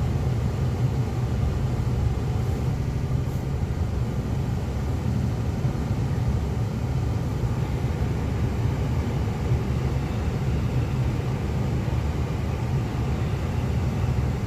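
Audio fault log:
2.81–3.05 s and 5.14–5.29 s: repeated frames. A 78.4 ms block, which fits three compressed frames, plays again three times and then twice, causing a stutter. The waveform and spectrogram show identical 78 ms copies. The clip grows by 235 and 157 ms.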